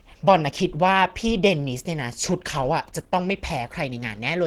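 Across the whole clip the speech sounds hoarse, grainy and muffled. This is likely Opus compression at a low bitrate, around 16 kbps, in hybrid mode. On a spectrogram the upper bands appear as smeared noise rather than clean harmonic lines.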